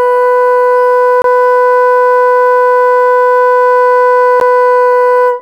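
At 1.22–1.24 s and 4.40 s the music drops into a block of digital silence, 23 ms then 12 ms, fitting 1024- and 512-sample buffers left unfilled. The first block is heard as a short hole, the second, under 15 ms, as a tick or dip. The waveform shows a flat line, and the spectrogram shows a blank vertical gap.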